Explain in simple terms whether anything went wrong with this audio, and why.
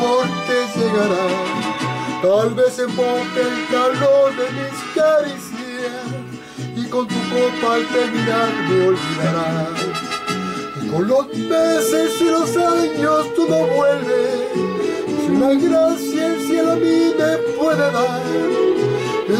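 Nothing went wrong here.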